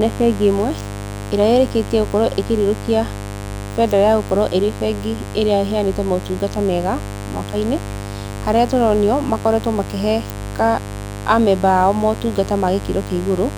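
A mains buzz runs under the speech from start to finish. Sharp switching spikes, from a dimmer, rectifier or missing shield, enter twice per 50 Hz cycle. Their harmonics climb into the kilohertz range. The result is a steady, raspy buzz, only about 10 dB below the speech.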